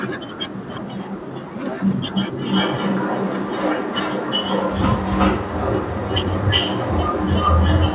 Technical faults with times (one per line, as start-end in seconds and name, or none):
0.68-1.10 echo leak
1.71-1.95 echo leak
2.35-7.94 echo leak